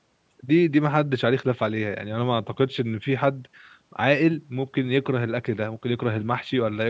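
No technical faults occur in this speech, which has been through a call's microphone processing and carries nothing above 8 kHz.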